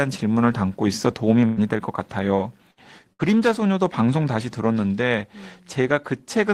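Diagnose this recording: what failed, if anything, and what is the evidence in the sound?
Burst of packet loss at the network stage, at 1.45 to 1.60 s, 2.71 to 2.80 s and 3.13 to 3.22 s in this speech. Each time, consecutive packets failed to arrive in time. The receiver filled the hole by extending and fading the last sound it had, for about 115 ms, 60 ms and 65 ms, heard as a brief held buzz or fading hiss. Speech then resumes with roughly 120 ms, 60 ms and 60 ms lost.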